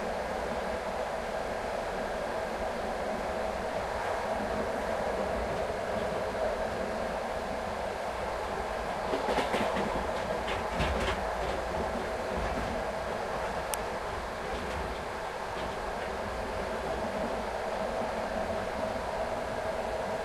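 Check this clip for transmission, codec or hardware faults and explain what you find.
There's one fault: an uninitialised buffer at 13.74 s. A block was sent to the output before any audio was written into it, so whatever junk sat in memory got played as samples. You hear it as a tiny, loud crack, short enough (about 0.73 ms) to fit a 32-sample block.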